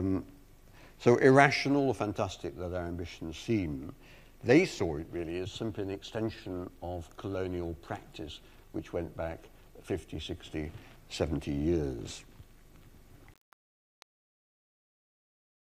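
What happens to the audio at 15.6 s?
At 15.6 s the fade-out is deep in truncation distortion on a fade, which runs from 13.34 s to the end at 15.76 s. The gain stage is quantising to what sounds like 8 bits without dither, so the quiet tail turns gritty. On a waveform the decaying signal becomes blocky square steps; a spectrogram shows broadband grainy noise and harmonics that come and go.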